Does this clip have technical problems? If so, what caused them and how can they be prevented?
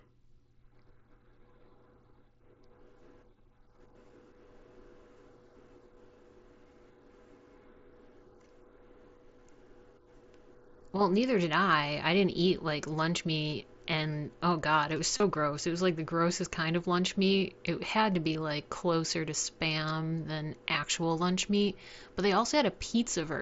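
Yes. The problem is concealed Bluetooth headset packet loss. Voice packets between the headset and the phone were dropped, and the receiver filled each gap by repeating the closest-matching stretch of the audio just before it. From 15.17 to 15.23 s, about 45 ms went missing across 60 ms, with the longest gap 30 ms, so a brief buzzy, held tone and a slight warble can be heard as real sound resumes. At 18.33 s a further 15 ms gap was filled the same way. Over the mSBC wideband link, the sound reaches 8 kHz with light graininess. To prevent this, keep the headset close to the phone with nothing in between, and reduce 2.4 GHz interference from Wi-Fi and other Bluetooth devices.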